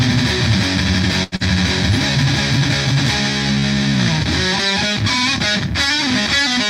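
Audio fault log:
1.23–1.35 s: short stall from a late packet. A packet arrived about 86 ms late, so the jitter buffer emptied and the last sound was held, then resumed with nothing lost.
1.36–1.43 s: short concealed packet loss. About 80 ms of audio never arrived; 41 ms of extrapolated fill was blended in, giving a brief smear, and the delay dropped back by roughly 40 ms.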